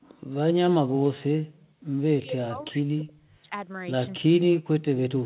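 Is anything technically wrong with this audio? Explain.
Yes. From 2.22 to 3.53 s the speech drops out in pieces, sinking by up to about 40 dB for roughly a second in total. This is likely speech suppressed in double talk: with both sides talking, the echo canceller couldn't tell the talker from loudspeaker echo and attenuated both.

Between 2.62 and 2.71 s a faint, brief delayed copy of the speech surfaces, about 35 dB below the main signal and trailing it by 339 ms. This is likely an echo leak, where the far side's canceller failed to fully remove loudspeaker sound picked up by its microphone. The leaked scrap carries the same 4 kHz ceiling as the rest of the band-limited call audio.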